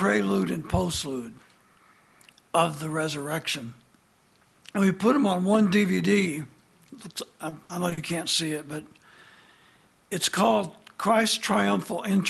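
Audio passed through a WebRTC-style call path, with a top end that stops near 12 kHz, consistent with an Opus codec at around 32 kbps. Between 7.49 and 7.99 s there is repeated packet loss, giving a robotic sound: four short dropouts, the longest 60 ms, each bridged by stretching the preceding audio, so about 140 ms of that half second, roughly 28 percent, is synthetic fill. On a spectrogram this shows as smeared, flattened or repeated bands in place of evolving detail, and the waveform shows looped chunks.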